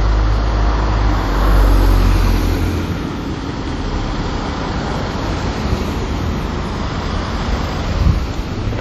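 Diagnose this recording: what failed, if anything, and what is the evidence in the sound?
The codec stage failed. Throughout the recording the sound rings and turns washy, with a hiss that swells and fades along with the signal, and nothing remains above 17.4 kHz. This is likely WMA compression at a rate that points to around 48 kbps. Its long transform blocks smear quantisation noise over tens of milliseconds and zero out weaker components. On a spectrogram this shows as a hard ceiling at 17.4 kHz, patchy holes in the upper bands, and noise smeared around transients.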